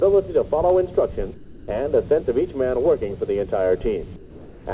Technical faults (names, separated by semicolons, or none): sound dropped by the voice detector; comfort noise in place of the background